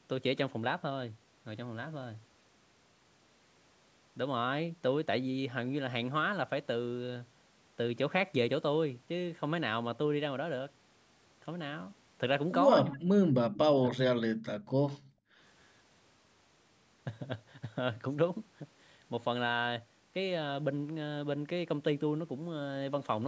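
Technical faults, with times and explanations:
12.85–13.08 s and 13.90–14.38 s, speech suppressed in double talk: the voice sinks sharply, by roughly 35 to 40 dB. This is likely an echo canceller that heard far-end audio over the talker, could not tell the two apart, and turned everything down.
14.66–15.38 s, background gated by the echo canceller: the room sound falls away by about 37 dB, for around half a second in total. The canceller clamped the microphone while the loudspeaker played and released it afterwards.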